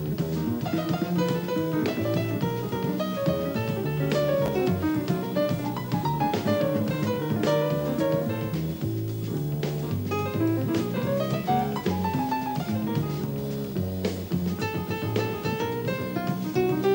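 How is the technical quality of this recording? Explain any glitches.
The recording has one glitch, a brief jumbled moment between 4.46 and 4.48 s. It sounds like a tiny stutter where the sound briefly scrambles. The cause is chunks out of order. A 10 ms chunk arrived or was written one chunk late, so it plays after the chunk that should follow it. Nothing is missing, but the swapped pieces create three hard joins.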